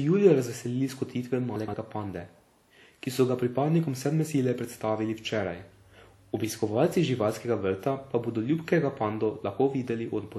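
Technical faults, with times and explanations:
Throughout, WMA compression. The sound has a ringing, washy quality, and a hiss that swells and fades with the signal. This is likely a transform codec such as WMA. It codes the audio in long blocks, so its quantisation noise smears across tens of milliseconds around each sound. Weak detail is discarded. The damage is plainly audible and fits a low bitrate near 48 kbps. Nothing is heard above 19.9 kHz.
1.56 to 1.74 s, chunks out of order. The audio briefly turns jumbled. A short piece of about 60 ms plays too late, after material that should have followed it. The sound points to a displacement of roughly two such pieces. Nothing is missing. The sequence is simply scrambled. The three abrupt splices and the reordering cause the garbled moment.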